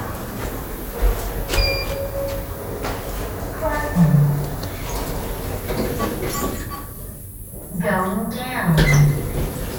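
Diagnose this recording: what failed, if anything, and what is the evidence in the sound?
The fault sits at the driver or buffer stage: clock drift buffer slips. From 0.38 s to 9.19 s a click recurs every 0.80 s, about ten in all, wherever there is signal. The likely cause is two devices on independent clocks, differing by roughly a couple of hundred ppm, so the buffer between them drifts until a handful of samples is dropped or repeated. The strictly regular interval distinguishes it from network packet loss or random dropouts, which come at irregular times.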